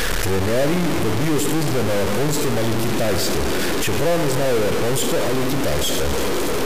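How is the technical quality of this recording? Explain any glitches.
Poor, because of harsh distortion throughout. It points to a stuck bit, likely. One data bit seems fixed, shifting samples by about -15 dBFS. The speech sounds buzzy, and pauses fill with loud noise.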